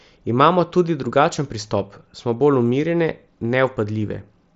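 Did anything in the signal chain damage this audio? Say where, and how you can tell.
No, nothing in the signal chain damaged this audio.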